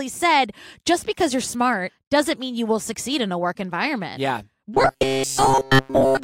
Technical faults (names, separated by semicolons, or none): robotic sound from repeated short buffers